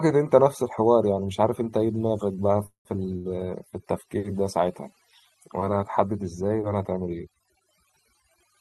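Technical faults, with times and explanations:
Throughout, mains hum: a steady low tone at 50 Hz with some low harmonics sits under the speech, around 20 dB below it. Power-line current is leaking into the signal path, which points to a ground loop or a transformer close to the recording chain.
Throughout, overdone noise removal: the background drops and breaks up into twinkling, chirpy specks. Noise reduction set too hard is switching off individual frequency bands near its noise estimate, taking quieter parts of the speech with them.
2.66–2.88 s, call audio freeze: the last sound carries on as a fading buzz or hiss for a moment, then about 120 ms of silence follows before speech resumes exactly where it stopped, with nothing lost. This is likely delayed packets draining the jitter buffer, leaving a 188 ms gap that pushes everything after it later.
3.17–3.28 s, short stall from a late packet: a sound is held too long, with a slight buzz or dip, for about 78 ms before the speech continues with nothing missing. 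A packet arrived after it was due, so the receiver stretched the previous sound to bridge the wait.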